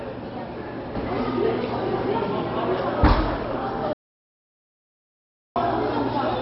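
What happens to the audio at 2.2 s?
At 2.2 s you're inside a sudden gain jump. From 0.95 s to the end, the sound and its background noise sit about 6 dB louder than before, all at once, with no fade. That's likely a digital gain change applied between two samples without any ramp.

The whole clip, 2.2 s included, is also dull and gurgly, with nothing above 5.6 kHz and a grainy, watery texture. That points to MP2 compression, likely at a very low rate around 32 kbps, where upper sub-bands drop out and the remaining bands get coarse quantisation.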